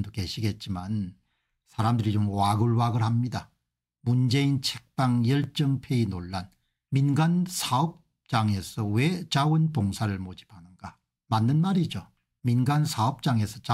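A single sharp click at 5.44 s is likely dropped samples, under a millisecond missing, so the waveform jumps abruptly and the spectrogram shows a thin vertical line.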